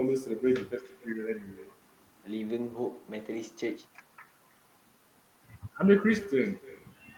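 This speech clip carries echo with no canceller throughout. Each phrase returns roughly a third of a second later as a faint copy, about 23 dB below the speech. The copy is thinner than the speech. The far end plays the call aloud and its microphone sends it back. Nothing cancels it.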